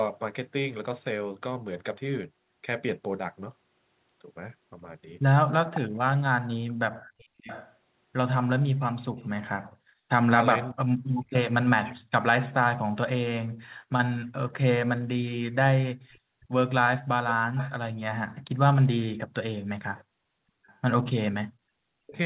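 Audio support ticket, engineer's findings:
Echo leak, 6.68–7.75 s, 16.11–16.46 s, 17.29–17.71 s, 19.96–20.04 s, 20.67–20.79 s: delayed speech copy, 0.61 s then 0.67 s late, about 15–35 dB down. Likely the far-end echo canceller passing residual loudspeaker pickup.

Speech suppressed in double talk, 10.24–10.32 s, 10.73–11.54 s, 22.0–22.16 s: talker cut out in pieces, drops of roughly 40 dB. Likely echo suppression muting near-end during overlap.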